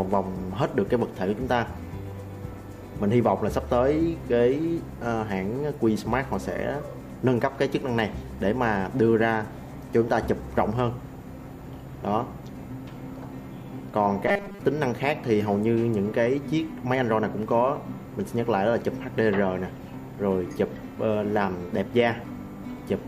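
From 14.27 to 14.59 s there is robotic sound from repeated short buffers, likely because new audio stopped arriving in time and the playback side kept filling the gaps by looping the last fragment it held, about 5 ms long. Most of the audio in that stretch is these repeats rather than fresh material, so the sound collapses into a rigid, metallic buzz fixed at 200 Hz that only loosely tracks what should be there.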